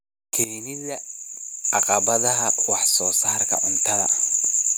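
A sudden gain jump at 0.44 s drops speech and background together by about 13 dB until 1.64 s, likely a gain change applied without a ramp.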